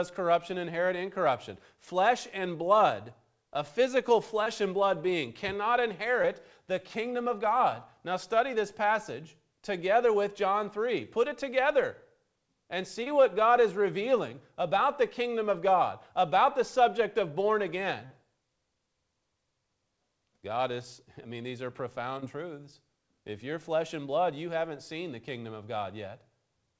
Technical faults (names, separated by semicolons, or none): short concealed packet loss